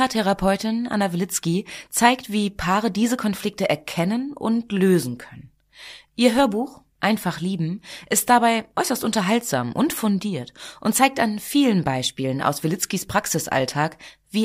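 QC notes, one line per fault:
No technical faults are present in the signal.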